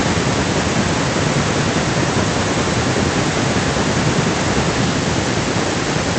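Listening to this speech recording, nothing stood out as a technical fault; the faint room background sits well beneath the talking, and the call path carrying it sounds as expected.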